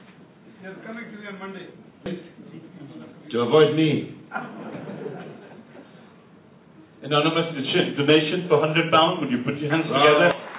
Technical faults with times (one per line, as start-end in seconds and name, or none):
2.06-2.08 skip ahead